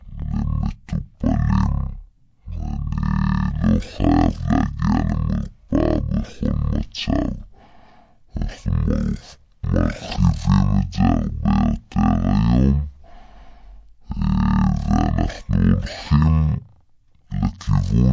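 From start to end the speech runs at half speed and a full octave low, the signature of a wrong sample rate. The samples are being clocked out at a different rate from the one they were captured at, with no resampling in between, so duration and pitch shift together by the same factor. A 0.5 speed ratio and a drop of 12 semitones fit audio recorded at 32 kHz being played back at 16 kHz, giving a slow, heavy, dragged sound.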